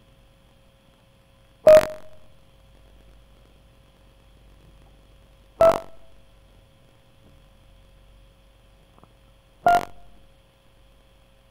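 A steady robotic rattle near 46.9 Hz runs through the music: buffer tearing, where each buffer, fitting 1024 samples, carries a small slice from about 70 ms earlier.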